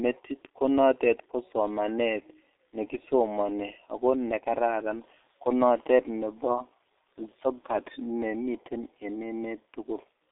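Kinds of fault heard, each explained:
G.723.1 codec: the speech passed through a very low-rate telephony codec coding long 30 ms frames, which fits G.723.1 at 6.3 kbit/s. Only about 250 Hz to 3.7 kHz survives, so the speech sounds heavily muffled and hoarse, with smeared consonants throughout.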